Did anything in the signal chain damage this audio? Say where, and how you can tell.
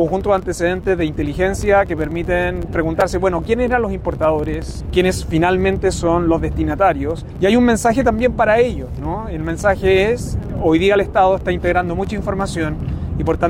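No, nothing in the signal chain stood out as damaging this audio on listening.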